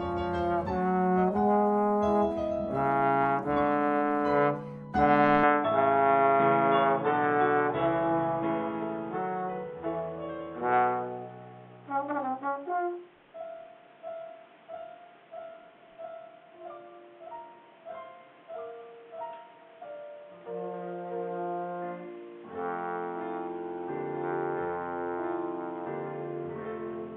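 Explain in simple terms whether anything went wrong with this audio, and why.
Something went wrong at 5.43 seconds: the recording most likely switched its input to a poorer device, such as a different microphone or a headset's call mode. From then to the end, the sound carries nothing above 3.8 kHz, so it turns dull and boxy. A new layer of background noise appears, quiet beneath the sound itself. The switch happens with no gap of silence, and the loudness stays about the same.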